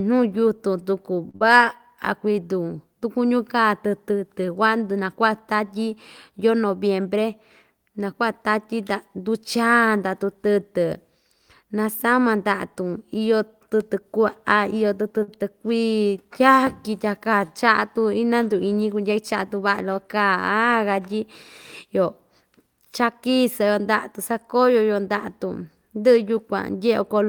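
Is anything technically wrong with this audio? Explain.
Yes. Three kinds of network playout fault affect this speech.

At 1.29 s, right after "yutun tuku", a short stall from a late packet holds the last sound about 45 ms with a slight buzz or dip; nothing is lost, unlike a dropout. The same happens at 15.23 s, held about 53 ms.

A burst of packet loss then follows immediately, from 1.36 to 1.43 s. Concealment fills about 47 ms with a fading held sound, and about 40 ms of speech is skipped, which is the difference from a stall.

A jitter buffer speed-up runs from 6.98 to 7.22 s, after "tatyi yoo", at 113% speed, trimming a few tens of milliseconds. Another runs from 18.96 to 19.62 s at 107%, trimming roughly 50 ms. Pitch-period cuts make the speech sound hurried at unchanged pitch, unlike resampling, which would raise the pitch.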